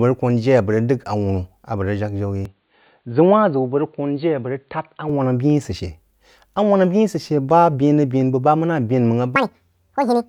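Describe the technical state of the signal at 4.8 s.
At 4.8 s the speech is still dull and boxy, about 5 dB quieter and a faint new noise floor, from 2.45 to 5.09 s. That's likely the input switched to a poorer device, narrower band and its own tone, with no gap at the change.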